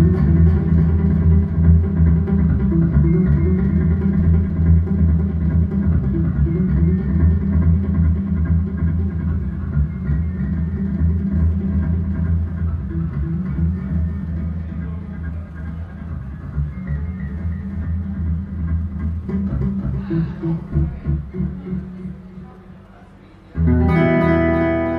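Nothing stood out on listening; no technical fault could be heard at any point in the clip.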